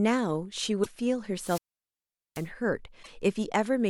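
Damaged data in a compressed stream shows up twice in this speech clip, at 0.82 to 0.87 s and again at 2.99 to 3.09 s. Both times corrupted frames throw the decoder off, so it misreads the frames there and loses sync while it hunts for the next valid frame header. A wireless microphone squelch dropout runs from 1.37 to 2.49 s: hiss swells as the FM radio link fades, the receiver's squelch then mutes the output for about 0.78 s, and the speech comes back.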